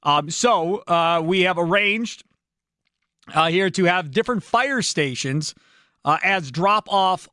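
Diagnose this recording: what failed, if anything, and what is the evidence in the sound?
Nothing failed; no fault can be heard in this speech.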